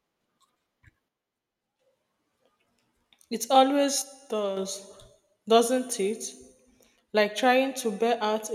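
One channel drops out twice, from 1.09 to 1.79 s and again from 4.02 to 4.57 s. Each time the speech abruptly falls about 6 dB and then jumps back up when the gap ends, with no fade in either direction. The likely cause is one side of the stereo feed going silent for roughly 0.7 s and then 0.55 s. After the two channels are summed to mono, only half of the shared signal remains.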